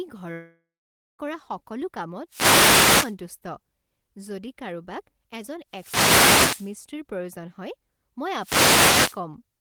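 From 0.33 to 1.21 s there is a long network dropout, likely from audio packets failing to arrive. The last sound is stretched into a fading buzz, then about half a second of silence, and the speech resumes with roughly 0.86 s simply gone.

Wireless microphone noise hits follow at 2.28 to 3.16 s, 5.70 to 6.78 s and 8.38 to 9.21 s. In each, the FM radio link fades, receiver noise swells into a swish of static, and the speech keeps running underneath rather than dropping out.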